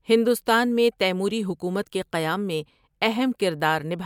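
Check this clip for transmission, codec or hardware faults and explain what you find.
No faults detected here.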